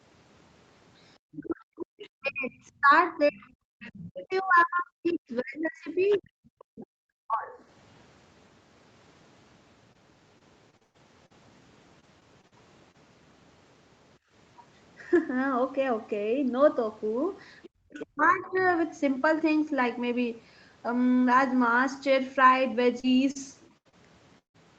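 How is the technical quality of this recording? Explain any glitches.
The recording has clear call faults: echo leakage, double-talk suppression, bursts of packet loss and a brief gating dip. The sound stops at 8 kHz, which fits a wideband Opus call at about 32 kbps.

Other side's voice leaking through: A second, faint voice appears at 1.32–2.08 s, 3.28–3.33 s, 3.87–5.14 s, 6.11–6.27 s and 17.63–18.73 s. It sits about 20 dB below the main speech, and about 30 dB below at 3.3 s. The likely cause is loudspeaker playback that the echo canceller did not fully remove.

Speech suppressed in double talk: From 1.36 to 7.6 s, and again from 17.67 to 18.63 s, the main speech sinks. The deepest drops reach roughly 40 dB. Both sides were talking together. The canceller likely could not separate them and pushed everything down.

Repeated packet loss (robotic sound): Choppy stretches occur at 9.93–11.32 s, 12.0–12.96 s and 23.0–24.56 s. 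They contain six, five and five holes. The longest holes last 114 ms, 42 ms and 157 ms. Each hole is filled by stretching the previous sound, which gives a robotic texture.

Background gated by the echo canceller: At 14.19–14.32 s the room tone drops by about 19 dB, then returns. The canceller clamped the microphone hard while the loudspeaker played. It released quickly, so the dip is brief.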